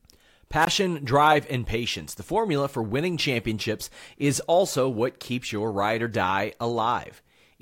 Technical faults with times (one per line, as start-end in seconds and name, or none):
0.57-0.70 wireless microphone squelch dropout